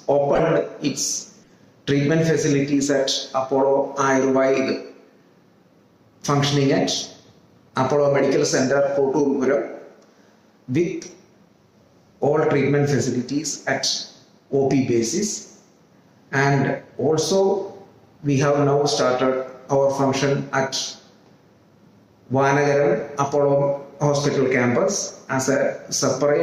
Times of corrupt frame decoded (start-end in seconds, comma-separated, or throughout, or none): 0.35-0.40, 1.43-1.54, 22.99-23.02, 26.10-26.14